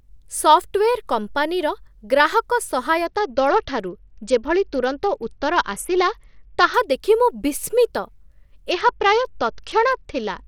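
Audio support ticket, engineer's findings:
Treble dulls and gritty quantisation noise rises, 3.06–6.74 s (after "ସଫ୍ଟୱେର୍ କମ୍ପାନୀର ଗ୍ରାହକ", clears by "ଦେଖି ମୁଁ") and again 8.71 s to end. Bluetooth SBC bit pool drop on a congested link. Top sub-bands starved, the rest coarsely quantised. The sound points to a bit pool falling from about 28 to 8, roughly 72 kbps. Recovers between events.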